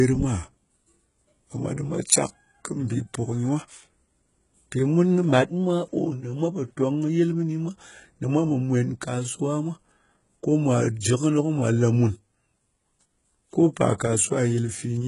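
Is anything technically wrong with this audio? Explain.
Yes. Throughout the speech, the treble is rebuilt rather than real: sibilants sound gritty and lispy, nothing sits above 11.1 kHz, and heavy damage likely reflects HE-AAC compression at a very low bitrate around 12 kbps, copying lower bands upward.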